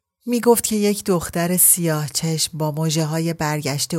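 No technical faults can be heard anywhere in the speech, and the signal stays steady and intact throughout.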